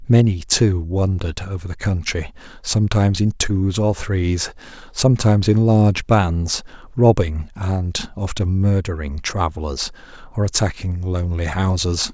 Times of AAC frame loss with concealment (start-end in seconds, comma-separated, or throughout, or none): none